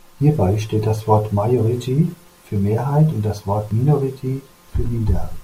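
At 3.71 s the speech drops into a block of digital silence about 1.3 ms long, which fits a 64-sample block left unfilled in time. It is too brief to hear as a hole, so it lands as a single tick from the abrupt edges rather than a faded dropout.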